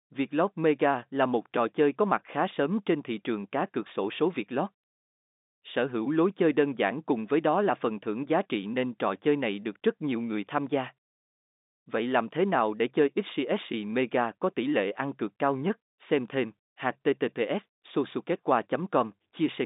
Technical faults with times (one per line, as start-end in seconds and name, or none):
none